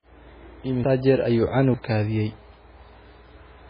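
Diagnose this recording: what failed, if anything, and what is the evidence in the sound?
Watery, swirly speech with nothing above 5.1 kHz throughout points to the codec stage: likely heavy MP3 compression, which fits a bitrate near 16 kbps.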